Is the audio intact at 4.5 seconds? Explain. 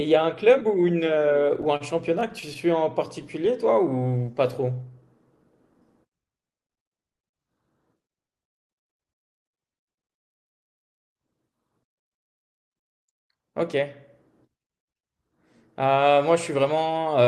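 Yes, the speech at 4.5 seconds is intact, with no dropout, glitch or other fault there, only the ordinary sound of the Opus call path, whose audio extends up to about 12 kHz.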